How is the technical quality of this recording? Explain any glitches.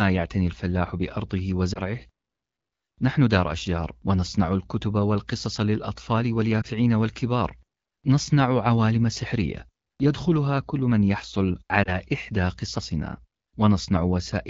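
The sound has three brief glitches, each a short dip or warble in the speech, at about 1.73 s, 6.62 s and 11.83 s. These are lost AMR speech frames. Each one sounds like a single missing 20 ms frame: radio errors corrupt the frame, and the AMR-WB decoder fills the gap by repeating the last good pitch and vocal tract settings at reduced gain. The voice then comes back weak or rough for a moment. Around the glitches, the wideband sound has the light coding texture that fits a 12.65 kbit/s HD Voice mode.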